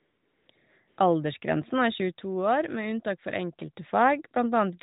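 From 0.0 to 0.48 s, again at 0.56 to 0.58 s, and from 0.88 to 0.98 s, the phone stopped sending speech frames and the receiver filled the gaps with AMR comfort noise, a smooth synthetic hiss that switches in and out. From 1.45 to 3.93 s, the microphone picked up its own loudspeaker and set off a loudspeaker feedback squeal at 6.3 kHz. It swells over roughly 0.7 s into a piercing tone about 10 dB above the speech.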